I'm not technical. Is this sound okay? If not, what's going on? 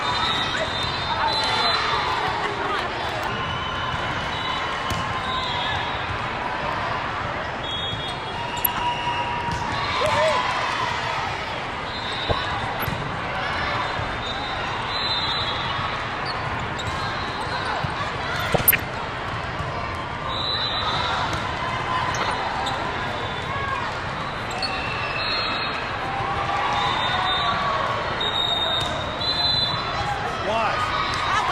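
No. Throughout, the sound is dull, with a gurgling, grainy roughness and upper detail that seems to flicker in and out. That is likely MP2 compression: the audio was squeezed too hard, so upper frequency bands were switched off and the rest coarsely rounded.

There are also four short bursts of DAB burbling, short blips of noise laid over the sound, at 8.65–8.84 s, 12.26–12.91 s, 18.40–18.80 s and 22.21–22.34 s. These come from reception errors corrupting the digital audio data, putting brief blips of noise into individual frequency bands.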